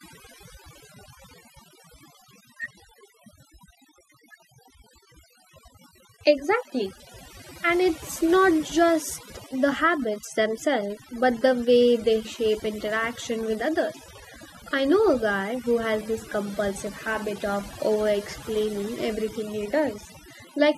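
Speech throughout with overdone noise removal: the suppressor clamps bands near its noise estimate, leaving near-silent gaps with twinkly specks.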